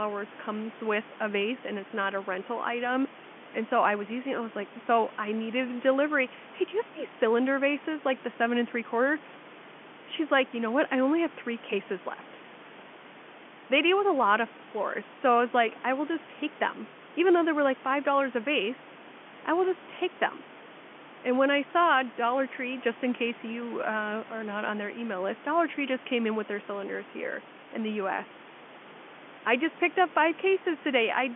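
Nothing goes wrong anywhere in this speech clip; you just hear an ordinary phone-line sound with the top end stopping a little under 4 kHz and a bit of room noise sitting about 18 dB below the talking.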